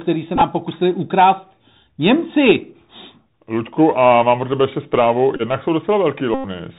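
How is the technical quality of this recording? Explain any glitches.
The quality is poor: narrowband headset audio with three short packet-loss glitches.

Bluetooth CVSD headset codec, throughout: a one-bit adaptive delta codec at 64 kbps cuts everything above 4 kHz, so the speech sounds muffled, with scratchy sibilants and granular hiss.

Bluetooth headset packet repeated, at 0.36–0.41 s before "pokusili ukrást", 5.36–5.42 s after "pro tebe ještě zprávu", and 6.34–6.45 s: lost voice packets were replaced by replays of the previous one. The first two, about 30 ms and 26 ms lost in short runs, give brief buzzy ticks. The last, about 100 ms, makes a steady buzz near 267 Hz.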